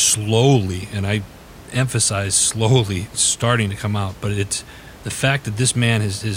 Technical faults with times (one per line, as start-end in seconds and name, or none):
none